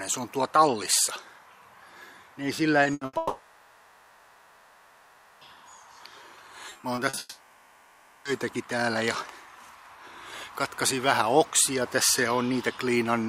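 The audio carries a chain of packet-loss faults in which the receiver covers missing stretches by continuing the last sound. At 2.83 to 2.87 s there is a short concealed packet loss: about 20 ms never arrived in time and was patched by extending the preceding sound and blending back in. It is heard as a brief smear or wobble. On a spectrogram it shows as a thin vertical band where the harmonic or noise texture freezes for a moment instead of evolving.

Right after, two bursts of packet loss follow at 2.93 to 3.03 s and 3.05 to 3.15 s, each with about 80 ms replaced. In each one the last sound is held and turned down, as a buzz if it was voiced or a hiss if not, and then the audio resumes further on with the lost section gone. In the waveform each burst appears as a repeated, decaying cycle pattern. The spectrogram shows flat, stretched partials that dim before normal detail snaps back.

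From 3.17 to 5.43 s the sound turns into a long, continued smear instead of new material, about 2.24 s in which fresh audio never resumes and true silence is never reached. This is likely a long network dropout, with concealment stretching on far past its usual range. The spectrogram shows a frozen, smeared texture with no new onsets. The waveform shows a low, repetitive envelope and no new transients until audio returns further along.

Between 6.69 and 7.19 s, repeated packet loss produces a choppy quality with pieces missing. Seven separate holes, the longest about 40 ms, are each patched by extending the last sound, and roughly a third of that half second is concealment rather than real audio. On a spectrogram this looks like a comb of short frozen slices interrupting the normal texture. The waveform shows small repeating chunks spliced between genuine segments.

The choppy stretch runs straight into a second long gap, from 7.19 to 8.27 s, about 1.06 s long. 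Here the sound is again a held, fading continuation of what came before, with only a trace of near-silence of about 10 ms before real audio returns. Visually it mirrors the earlier gap: a flat, decaying smear with no fresh onsets, then an abrupt return of normal spectral detail.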